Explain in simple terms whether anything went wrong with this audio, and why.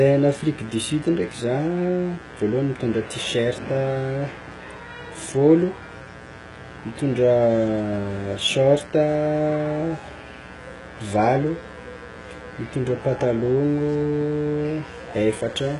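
Two things went wrong, and both last from start to finish.

First, a mains buzz got into the recording. Electrical interference from 60 Hz power, probably from a dimmer, power supply or poorly shielded cable, leaked in as sharp spikes. You hear it as a steady, raspy buzz under the speech the whole way through, quieter than the talking.

Second, the speech was squeezed very hard, likely by HE-AAC compression. This kind of encoder keeps only the lower sounds and fakes the treble by copying lower parts upward. Here the damage is heavy: nothing survives above about 11 kHz, and s sounds come out gritty, metallic or lispy.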